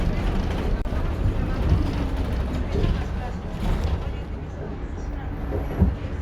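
At about 0.82 s there's a gap at a join of encoded pieces. The sound drops out for roughly 33 ms, until 0.85 s. It looks like two separately encoded chunks were butted together untrimmed, leaving encoder delay and padding silence in. The edges are smeared, and the sound resumes exactly where it stopped.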